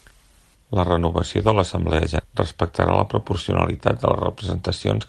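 A speech clip with one skip ahead at about 2.19 s, running to 2.30 s. Playback just jumps forward with essentially no gap, and roughly 0.7 s of audio is simply gone, with the two sides butted together almost directly. That's the signature of audio being dropped, either in transit or by an overflowing jitter buffer discarding queued packets, so the delay shrinks by about that same 0.7 s. It all rides over a call path whose codec top end sits around 12 kHz.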